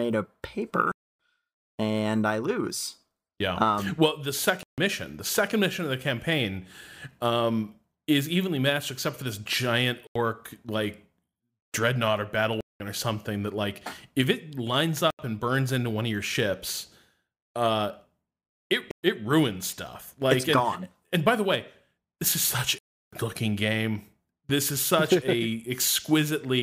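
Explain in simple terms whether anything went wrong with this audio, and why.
The speech drops out seven times, at 0.92, 4.63, 10.07, 12.61, 15.10, 18.91 and 22.78 s. Each dropout is a block of digital silence lasting 85 to 340 ms. The output buffer most likely wasn't filled in time, so the sound cuts out and back with no fade.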